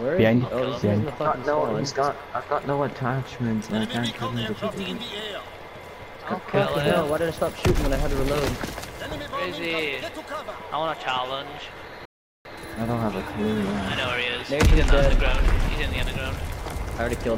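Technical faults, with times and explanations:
12.05 to 12.45 s, rebuffering stall: the audio drops abruptly to silence for about 0.4 s, then picks up again exactly where it broke off, with nothing skipped and nothing repeated. The player had exhausted the audio it had already downloaded, so playback paused until enough new data arrived to continue. Because the stream waits instead of jumping ahead, no material is lost, but roughly 398 ms of dead air is inserted into the timeline.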